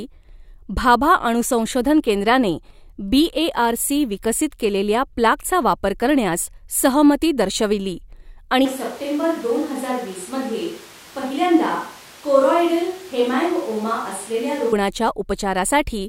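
At 8.65 s the speech suddenly goes roomy, hollow and thinner, a few dB quieter with more background noise, until 14.72 s. That's a switch to a distant microphone, likely after the close mic dropped out.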